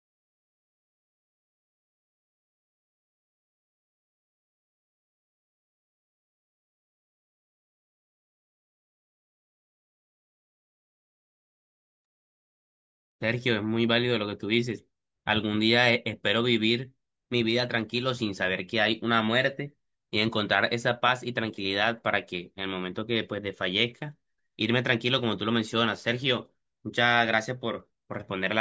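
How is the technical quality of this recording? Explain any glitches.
The technical quality of the recording is sound, with no glitches to explain.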